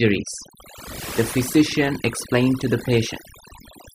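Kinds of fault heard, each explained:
Overdone noise removal: aggressive denoising mutes bands near the noise floor throughout, leaving near-silent gaps with twinkling specks and a patchy, holed spectrogram between harmonics.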